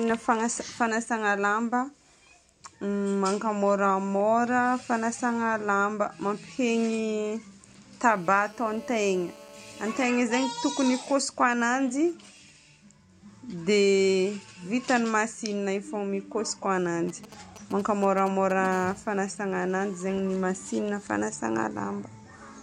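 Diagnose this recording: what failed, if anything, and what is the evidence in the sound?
GSM phone buzz enters in the analogue wiring. A hard, raspy buzz at about 217 Hz, rich in harmonics, runs from 8.06 to 10.05 s and from 18.72 to 21.04 s. It sits about 24 dB and about 29 dB below the speech. A nearby 2G phone in a call pulses steadily, and the audio circuit rectifies those pulses.

GSM signalling bursts also arise in the analogue stage. From 10.09 to 12.50 s there is a faint pattern of even ticks with a longer 217 Hz buzz twice a second. A much louder run follows from 17.09 to 18.67 s. The phone is sending only short groups of radio bursts, and the circuitry demodulates each group.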